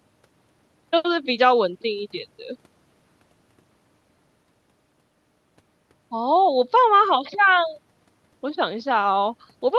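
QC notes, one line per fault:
No faults heard anywhere in this speech recording.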